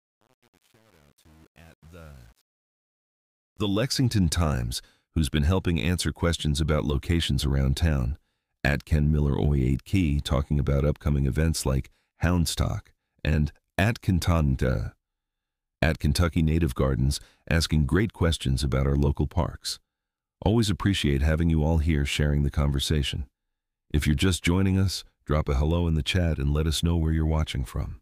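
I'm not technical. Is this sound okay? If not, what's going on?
No. The volume stage handling the fade-in at the start kept too few levels of detail and added no smoothing noise, which fits roughly an 8-bit stage. The result is truncation distortion on a fade: from 0 to about 3.5 s the rising sound is gritty, and it clears by 4.06 s, where the fade-in finishes.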